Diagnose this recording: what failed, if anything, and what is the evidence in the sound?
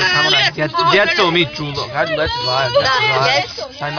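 Nothing stood out on listening that would point to a failure at any stage of the chain.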